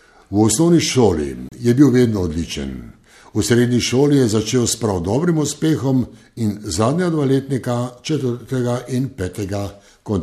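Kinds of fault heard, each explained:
Gap between stream segments: two segments' timestamps don't meet, so the player fills a 30 ms hard-edged hole in the speech at 1.49 s, nothing lost.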